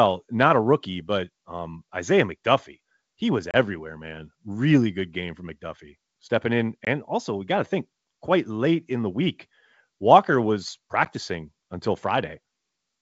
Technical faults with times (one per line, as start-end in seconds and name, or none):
3.51-3.55 packet loss on an ADPCM call
6.85-6.87 packet loss on an ADPCM call
11.05-11.07 packet loss on an ADPCM call